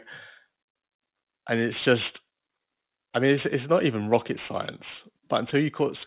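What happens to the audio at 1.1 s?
Aliasing runs through the whole clip, including 1.1 s: audio was resampled down without an anti-alias filter, folding energy above 4 kHz back as gritty, metallic sibilants.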